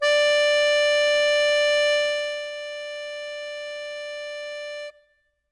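From start to finish, the music carries the marks of 4-bit ADPCM compression. Each sample is stored as a small coded step from a predicted value, and the step size adapts as the sound moves. The resulting error is plainly audible. It is a gritty hiss that rides on the loud passages and follows their level. Nothing is present above 10.7 kHz, so the top end sounds dull. That fits a rate near 89 kbps.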